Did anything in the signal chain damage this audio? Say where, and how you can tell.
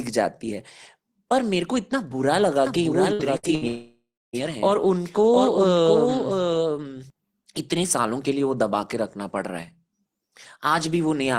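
Yes. From 2.67 s to 7.10 s the speech carries a second, clean copy of itself trailing by roughly 0.7 s and only about 5 dB quieter, so every phrase is shadowed by a distinct repeat. The repeat has no reverberant tail or room colour and cuts in and out abruptly. That points to a doubled audio track, likely from the same signal being picked up a second time through a slower capture or monitoring path.

Three short breaks fall at 3.13 to 3.22 s, 3.37 to 3.46 s and 3.55 to 3.64 s. In each, the last sound is stretched into a fading buzz or hiss for about 60 ms, then speech resumes with about 60 ms skipped. This is burst packet loss on the network leg: packets arrived too late or not at all, and the receiver's concealment papered over each gap before jumping ahead.

Right after these, from 3.67 s to 4.36 s, the sound is held and faded again, then goes silent for about 0.3 s before speech returns with roughly 0.66 s missing. 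A gap this long is beyond what concealment can cover, and it is likely a long network dropout, with nothing reaching the receiver for well over half a second.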